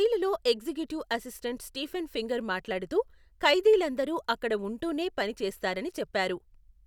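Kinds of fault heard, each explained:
No kinds of fault are heard in this speech clip.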